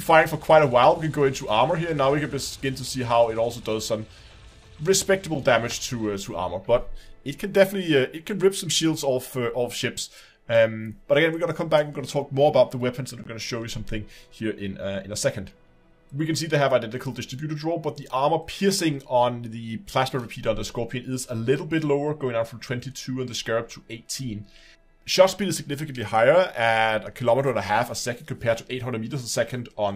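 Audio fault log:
5.35 s and 13.24 s, block of digital silence: the signal drops straight to silence for about 7 ms and then about 17 ms, as if the output buffer wasn't filled in time, and returns with no fade. The first is heard as a sharp tick and the longer one as a tiny pop-like hole. On the waveform these are flat, near-silent lines with steep jumps at both ends; a spectrogram shows a vertical broadband stripe at each edge around a blank gap.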